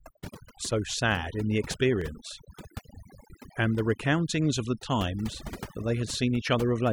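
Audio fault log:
Throughout: overdone noise removal. Noise reduction pushed too hard mutes individual frequency bands near its noise estimate, taking quieter parts of the speech with them. The background becomes near silence with twinkling specks. A spectrogram shows sparse, blotchy time-frequency patches amid empty black gaps.
0.28 to 5.48 s: clock drift buffer slips. A regular click recurs every 1.73 s, about four times. The likely cause is two clocks disagreeing by a couple of hundred parts per million, so a small block of samples is dropped or repeated. A waveform shows a sudden step discontinuity, and a spectrogram shows a thin vertical broadband line.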